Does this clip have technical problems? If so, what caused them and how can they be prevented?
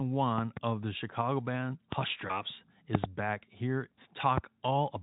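Yes. Loud pops occur at 0.38–0.59 s, a double pop peaking about 15 dB above the speech just before "of the"; 1.92–1.95 s, a single pop about 25 dB up; 2.95–3.06 s, a double pop about 25 dB up just before "back here"; and 4.38–4.40 s, a single pop about 20 dB up just after "back here". Each is a sharp transient over continuing speech, likely a voltage step from a connector, switch, static discharge or driver glitch that the downstream circuitry shapes into a brief thump. Secure cabling, ground the setup, and mute the input before switching or plugging anything in.

At 2.27–2.42 s there is VoIP packet loss concealed by the speech codec. The sound briefly smears into a buzzy tone or coloured noise that fades, consistent with a single lost 20 ms frame. The decoder extrapolates from the previous frame, and because each frame depends on the one before, the speech stays weak for tens of milliseconds or more after packets resume. 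A more stable network link, a larger jitter buffer, or forward error correction would reduce these gaps.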